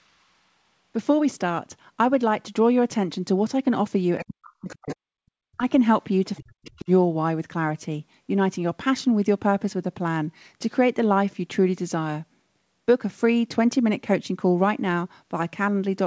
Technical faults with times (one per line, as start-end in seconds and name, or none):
4.19-5.16 speech suppressed in double talk
4.68-4.96 other side's voice leaking through
5.57-5.62 speech suppressed in double talk
6.36-6.41 other side's voice leaking through
6.41-6.89 speech suppressed in double talk
6.66-6.84 other side's voice leaking through